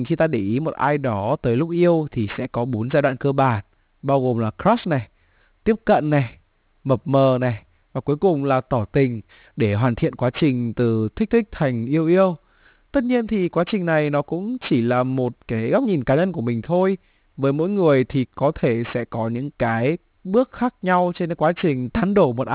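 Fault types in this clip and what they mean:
Aliasing: Throughout the speech, energy above 4 kHz has folded back into the band below it instead of being removed, which fits a drop from 44.1 kHz to an 8 kHz rate with no anti-alias filter first. Sibilants pick up gritty, metallic tones at pitches unrelated to the speech, sitting roughly 25 dB below it, and the spectrum stays full right up to the 4 kHz edge rather than rolling off.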